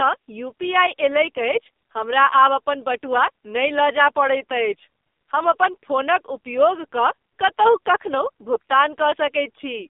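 AMR narrowband mobile codec throughout this speech clip: the band sits between 250 Hz and 3.7 kHz, and heavy buzzy, synthetic coding fits a low mode around 5.9 kbps. Lost AMR speech frames at 8.54 to 8.57 s: a single missing 20 ms frame was patched from the previous pitch and vocal tract settings at reduced gain, leaving a brief dip.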